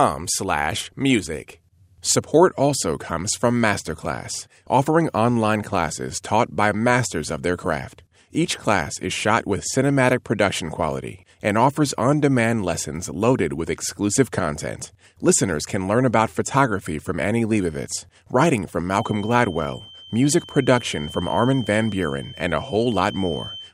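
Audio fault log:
18.85–23.74 s, feedback whistle: just after "writing from", a thin, steady tone near 3.1 kHz appears behind the speech and continues to the end of the clip, sitting roughly 20 dB under it and swelling and fading slowly in level. The likely cause is a loudspeaker-to-microphone loop held right at the edge of feedback. That single frequency keeps recirculating with just enough gain to sustain itself without running away, so it rings on as a whistle rather than building into a howl.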